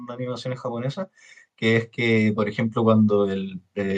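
Speech, with automatic gain rising from 1.6 s to 3.95 s: the gain control judges the input too quiet and lifts it by about 5 dB, so voice and background noise swell together. On a waveform the envelope widens steadily; a spectrogram brightens uniformly, including the noise floor.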